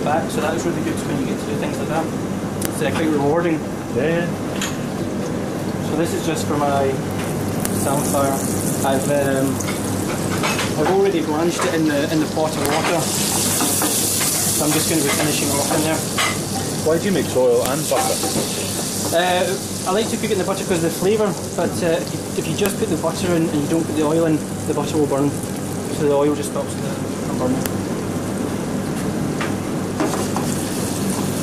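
Sharp, loud clicks land at 2.65, 7.65, 12.66, 17.66, 22.66 and 27.66 s, a steady 5.0 s apart. This is a file header played as audio: each joined 5 s piece kept its WAV header, whose bytes play back as a brief snap regardless of the surrounding sound.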